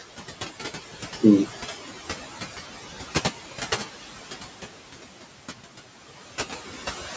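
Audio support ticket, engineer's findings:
Noise suppressor artifacts, whole clip. Background noise pumps: drops away in pauses, comes back up under speech. Probable component: the call's noise suppression stage. Mechanism: per-frame gain on bands judged to be steady noise, pulling the room noise down about 15 dB between phrases. Room noise sits about 14 dB below speech. Band-limited to 8 kHz by the call microphone chain.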